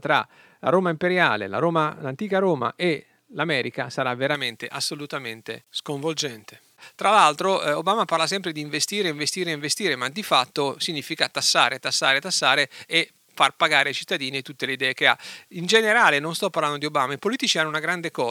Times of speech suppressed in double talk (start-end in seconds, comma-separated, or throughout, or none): none